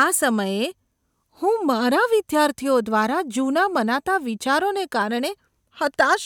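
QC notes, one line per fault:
No faults were heard anywhere in the speech clip on listening.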